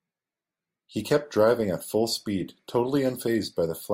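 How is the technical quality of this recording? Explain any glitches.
No technical faults can be heard in the recording; the speech signal stays continuous and stable throughout.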